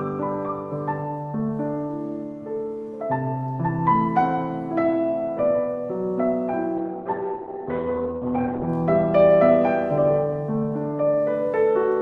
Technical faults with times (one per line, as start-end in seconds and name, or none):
6.78-8.75 call bitrate drop